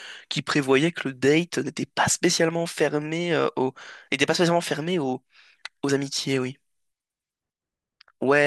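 No technical faults can be heard anywhere in the recording; the signal stays steady and intact throughout.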